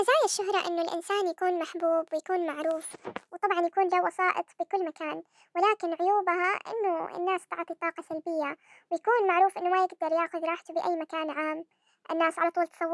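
Throughout, the speech runs 1.5 times fast and about seven semitones high, a wrong sample rate that fits 16 kHz audio played at 24 kHz without conversion.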